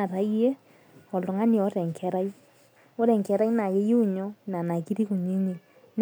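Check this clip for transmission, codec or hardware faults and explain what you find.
No transmission, codec or hardware fault can be heard anywhere in this speech clip.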